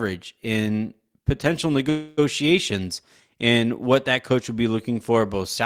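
Delayed packets likely emptied the jitter buffer after "in potential": a call audio freeze from 1.89 to 2.19 s smears the last sound, then the speech resumes, nothing lost.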